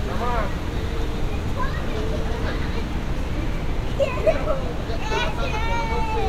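Nothing here stands out as a technical fault; the sound simply runs along without any glitch worth pointing to.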